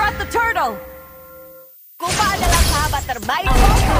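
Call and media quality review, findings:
Switching supply whistle, throughout. High steady-ish tone near 15 kHz, wandering within about 14.6 to 15.1 kHz, roughly 30 dB under the programme. Probable component: nearby switching power supply running in audible burst mode or beating with another supply, leaking into the audio path.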